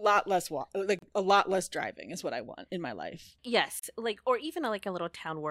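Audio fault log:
0.99–1.02 s, gap at a join of encoded pieces: separately encoded segments were butted together untrimmed, so one encoder's start-up delay and the other's final-frame padding remain between them. About 35 ms of silence cuts into the speech after "less walk", edges softened by the codec, before "a lot less driving" resumes where it left off.
3.79–3.83 s, gap at a join of encoded pieces: the same untrimmed join leaves a 39 ms hole after "want in my life", then "like or" carries straight on.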